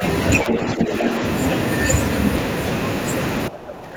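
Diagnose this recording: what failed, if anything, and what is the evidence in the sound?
Speech suppressed in double talk, in the call-processing stage. From 0.44 to 1.21 s the talker's level sinks by about 5 dB. From 3.48 s to the end of the clip it drops harder, by about 15 dB. Each stretch loses roughly half a second of level in total. The likely cause is the echo canceller failing to separate near and far speech and attenuating both. Packet loss leaves abrupt gaps or smeared repeats. Here the voice ducks in level instead.

Other side's voice leaking through, also in call processing. Between 0.49 and 0.72 s a second voice is audible under the talker, only a few dB quieter, inside the first suppressed stretch. This is likely far-end audio from the loudspeaker that the echo canceller left in the microphone signal. Room reverberation would smear the talker's own voice. Here the overlap is a distinct, separate voice, which places the fault in echo handling rather than acoustics.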